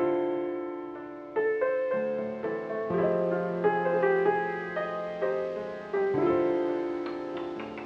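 No technical faults can be heard anywhere in the recording, and the signal stays steady and intact throughout.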